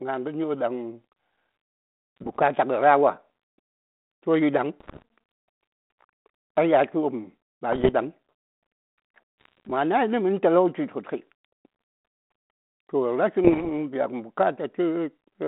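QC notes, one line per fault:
2.17–2.41 s, 4.80–5.02 s (after "toh yi ɗaŋ"), 7.72–7.93 s (after "a yatl wopm ba"), 9.40–9.69 s (before "ma nayi nə"), 13.45–13.71 s: bit errors on an ADPCM link. Each burst lasts about a quarter second. It brings pops, rough crackle and brief jumps in level. Flipped bits corrupt the decoder's step size and predictor, so each error keeps ringing for milliseconds. The narrow band, about 200 Hz to 3.7 kHz, fits a 32 kbit/s G.726 path. The 4.80 s burst is densest, at a couple of percent.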